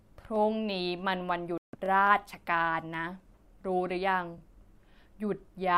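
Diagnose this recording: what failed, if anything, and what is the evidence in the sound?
Dropped samples at 0.36, 2.07 and 2.94 s, each heard as a single sharp click in the speech. The waveform jumps forward across a tiny fraction of a millisecond, too short to remove any sound. This points to a driver or buffer stage that likely skipped a few samples.

Bluetooth stall from 1.58 to 1.75 s: the speech cuts to roughly 155 ms of silence, then resumes. This is a playback-stage fault: radio interference delayed packets, the headphone buffer ran dry, and audio likely paused until the resent packets arrived.

Overlapping chunks at 1.86 to 1.88 s and 4.38 to 4.40 s, heard as a brief stutter where about 21 ms of speech plays twice. The joins fall 2.5 s apart, so each processing chunk begins slightly before the previous one ended.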